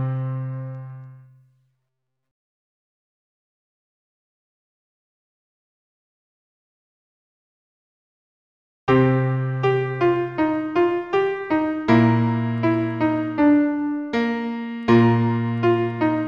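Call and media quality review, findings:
No findings in this call and media quality review: nothing audible to report.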